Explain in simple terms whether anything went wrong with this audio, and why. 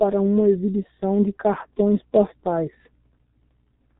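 The G.723.1 codec damage runs through the whole recording, from start to finish. This is an old internet-phone codec that squeezes speech into very little data. It throws away everything above about 3.9 kHz, which leaves the speech sounding muffled, as if heard through a wall. It also rebuilds the voice from a rough model that changes only slowly, so the sound comes out hoarse and the consonants are smeared together.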